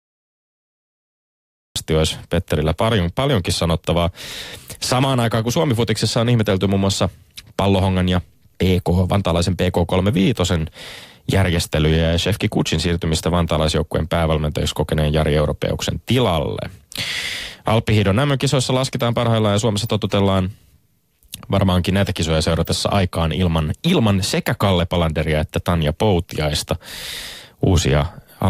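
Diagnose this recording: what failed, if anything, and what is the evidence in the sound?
A cut-off start, at the recording or storage stage: the file holds digital silence from 0 to 1.76 s, then speech enters already in progress, with no attack or fade-in. Capture began late. Unlike a noise gate opening, nothing before 1.76 s was ever recorded.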